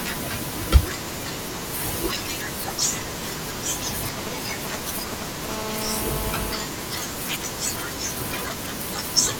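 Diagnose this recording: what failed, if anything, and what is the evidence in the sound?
GSM phone buzz enters at the analogue stage, in the wiring and input circuitry. From 5.49 s to 6.64 s a hard, raspy buzz sits under the speech. It repeats at about 217 Hz and carries a dense stack of harmonics, and it has no relation to the speech. It stays steady throughout, as a phone in an active call would produce. It is loud, only about 6 dB below the speech. A nearby 2G handset was transmitting in bursts, and the audio circuit rectified those radio pulses into audible sound.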